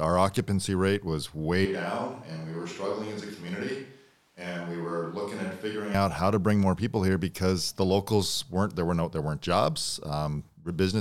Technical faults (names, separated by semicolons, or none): switch to a distant microphone